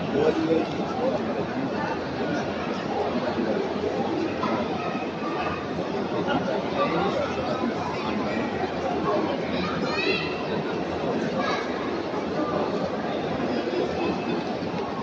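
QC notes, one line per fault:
No faults were heard anywhere in the clip. Nothing here calls for a QC entry.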